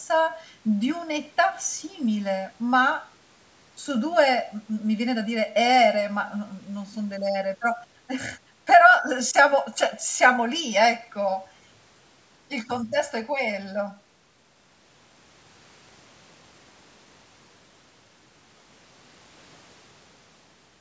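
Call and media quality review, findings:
Hollow, phasey speech throughout the whole clip, with fixed notches starting near 400 Hz and repeating at even spacing up the band. This is channel delay (comb filtering): one channel about 1.5 ms late, summed to mono, cancelling shared content. Call microphone processing band-limits everything above 8 kHz.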